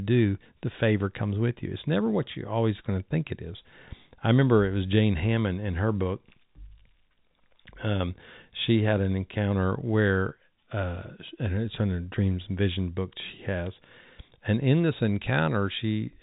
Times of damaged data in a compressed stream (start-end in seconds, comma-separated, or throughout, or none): none